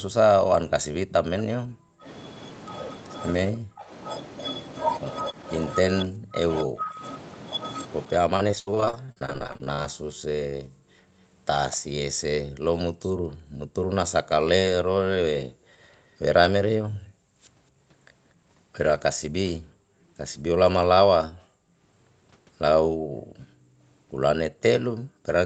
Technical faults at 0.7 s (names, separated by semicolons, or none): none